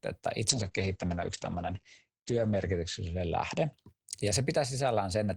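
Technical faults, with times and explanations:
0.5–3.79 s, call bitrate drop: the speech turns coarse and watery as the encoder runs short of bits, sounding like a fall from about 32 to 9 kbps. On a spectrogram everything above 8 kHz vanishes for 1.84 s at the lowest point, then full bandwidth returns.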